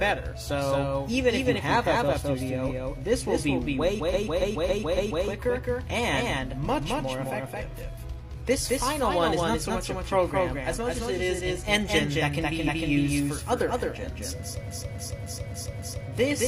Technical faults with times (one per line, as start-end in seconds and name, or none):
0.00-16.47 doubled audio track
4.09-5.20 repeated frames
12.63-12.87 repeated frames
14.63-16.03 repeated frames